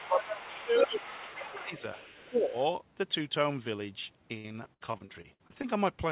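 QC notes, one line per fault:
0.00–2.55 s, speech suppressed in double talk: The talker's level dips at 0.00–0.39, 0.56–1.03, 1.19–1.98 and 2.29–2.55 s. The deepest drops are about 15 dB, and about 10 dB in the third dip. The echo canceller likely could not separate the talker from loudspeaker echo, so it turned both down.
0.04–2.65 s, other side's voice leaking through: A second voice sits under the talker at 0.04–0.60, 0.79–2.29 and 2.47–2.65 s. It is about 10 dB below the speech at first, then about 15 dB below, and finally about 35 dB down. This is likely residual loudspeaker sound that echo cancellation left in the microphone.
4.38–5.65 s, repeated packet loss (robotic sound): Over a dozen short holes hit this stretch, and the longest is 66 ms. Each one is patched by stretching the sound just before it. About a third of the span is filled this way, so the speech turns choppy, with pieces missing.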